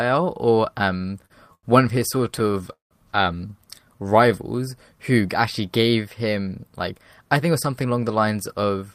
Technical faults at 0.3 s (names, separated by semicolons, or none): none